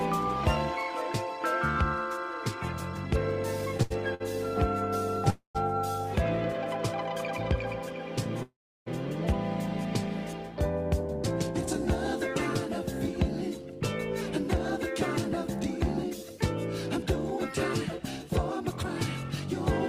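Repeated stalls (stutter) at 3.77–4.22 s: packets arrived late three times, and the receiver stretched the last sound through gaps up to 78 ms, filling a third of that stretch. Call audio freezes at 5.30–5.57 s and 8.43–8.88 s hold the sound, then fade it to silence for 100 ms and 320 ms, likely because packets were held up and the jitter buffer ran empty. Jitter buffer speed-up at 16.04–18.30 s: the receiver trimmed about a tenth of a second in tiny pitch-period slices, so the audio runs at 103% speed with unchanged pitch.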